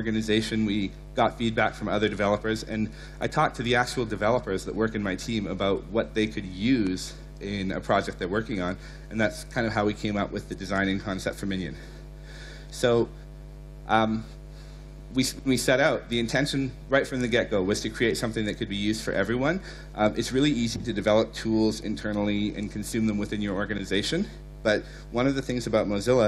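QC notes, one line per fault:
6.68–7.25 s, CD scratch ticks: four sub-millisecond ticks, one per disc rotation, where damaged data was concealed. They show as thin vertical broadband lines on a spectrogram.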